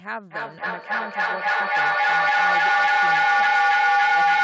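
From 0.31 s to the end, a feedback howl takes over the speech. A shared room lets the loudspeaker feed the microphone, and each trip adds level. A tone near 700 Hz builds, with the loop repeating about every 300 ms, peaking about 16 dB above the speech.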